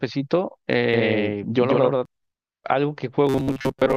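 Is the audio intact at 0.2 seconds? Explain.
Yes, the speech at 0.2 seconds plays through intact, with no fault there.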